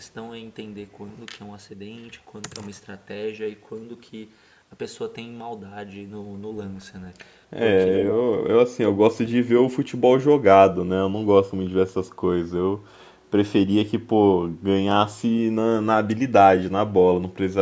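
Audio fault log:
7.94–8.13 s, echo leak: a faint, delayed copy of the speech trails the original by 315 ms, sitting about 10 dB below it. The likely cause is a far-end loudspeaker whose sound reached its microphone and was not fully cancelled, so the talker's own speech returned. Unlike reverberation, which smears the sound continuously, this is a distinct repeat arriving after a clear gap. It is brief, lasting only about 0.2 s.
8.7–8.78 s and 8.97–9.34 s, speech suppressed in double talk: the speech drops sharply twice. The first dip lasts about 70 ms and goes down by roughly 25 dB. The second lasts about 0.3 s and goes down by around 30 dB. Both sides were likely talking at once, and the echo canceller turned down the talker along with the echo. A network dropout cuts abruptly to silence, but these dips come while both sides overlap.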